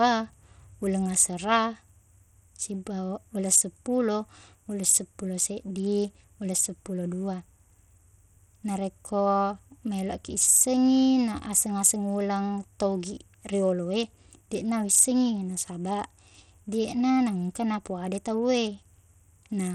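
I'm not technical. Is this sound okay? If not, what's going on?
No. For the whole clip, the speech carries the sound of Bluetooth SBC compression, likely from being sent over a wireless Bluetooth link. SBC splits the sound into a few broad bands and spends very little data on the highest ones, so the top end stops near 15.9 kHz and the fine crispness of the speech flickers. The remaining bands are handled coarsely, leaving an audible gritty layer over the sound.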